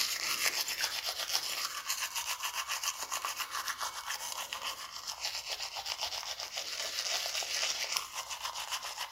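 No technical faults can be heard anywhere in this recording of sounds. Nothing in it calls for a timestamp or a fix.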